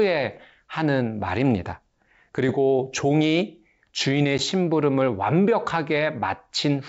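Packet loss on an ADPCM call at 4.38 to 4.43 s: about one packet, 10 ms, becomes a hard-edged silent gap. The decoder's predictor and step size drift from the sender's, so the speech returns slightly distorted before settling.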